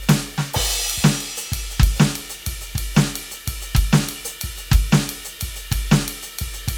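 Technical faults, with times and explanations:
No technical faults can be heard in this music; the signal stays continuous and steady, with nothing breaking into it at any point.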